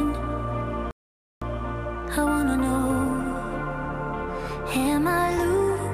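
At 0.91 s the sound cuts off in mid-flow and the output falls completely silent for about 0.51 s, picking up again at 1.42 s. This is a playback stall, most likely the player running out of buffered data or its playback thread being held up. What sets it apart from an ordinary dropout is its length: half a second of dead silence is a clear halt, not a momentary click or gap lasting a few milliseconds.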